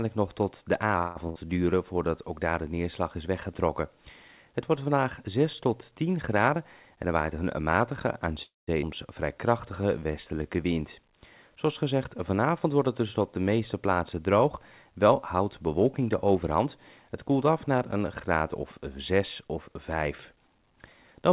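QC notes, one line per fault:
0.98 to 1.17 s, call audio freeze. The sound stalls for about 170 ms. The last sound is drawn out as a fading buzz or hiss and never drops fully to silence. Playback then resumes where it stopped, with nothing lost. The likely cause is packets held up in transit, so the jitter buffer ran dry and the delay grew by that amount.
1.29 to 1.37 s, burst of packet loss. About 60 ms of audio is gone for good. The receiver bridged the hole with a held, fading continuation of the preceding sound. The audio then picks up further on, so the part in between is simply missing.
6.37 to 8.28 s and 15.33 to 16.67 s, jitter buffer speed-up. Playback runs fast, at 107% in the first stretch and 109% in the second. Pitch stays put. In each stretch about 150 ms is trimmed out in tiny pitch-period slices. The buffer had built up too much delay and was draining it. The result sounds hurried.
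8.43 to 8.69 s, call audio freeze. This one is longer, about 250 ms. The held sound fades out, and the last 180 ms or so is plain silence before the audio returns. Nothing is skipped here. The stall just pushes everything later by roughly a quarter of a second. Again, the likely cause is late packets leaving the buffer empty.
8.81 to 8.84 s, skip ahead. Playback jumps forward abruptly, with almost no gap at the join. Roughly 150 ms of audio is dropped, so the two sides of the cut meet nearly directly.
9.35 to 10.74 s, jitter buffer slow-down. Playback drags at 90% speed, with pitch unchanged. About 150 ms is added by repeating single pitch periods and bits of pauses. The buffer was running low and rebuilding its reserve. Sounds come out stretched, all within the call path's band limit of 4 kHz.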